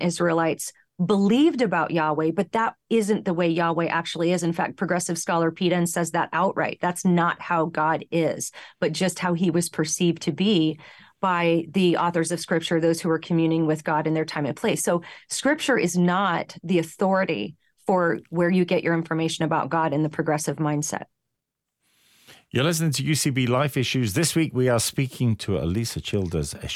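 No technical faults are audible.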